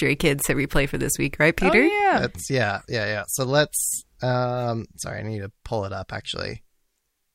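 No technical faults can be heard anywhere in this speech recording. There is no event in its timeline that needs to be placed or explained.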